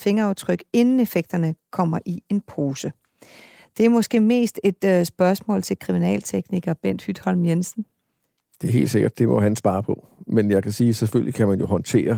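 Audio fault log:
Nothing stood out as a fault on listening.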